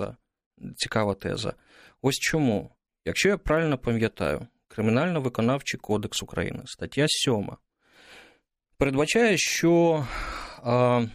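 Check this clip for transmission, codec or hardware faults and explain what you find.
Nothing wrong turns up here; the speech comes across steady and intact all the way, with no transmission, codec or hardware faults to point to.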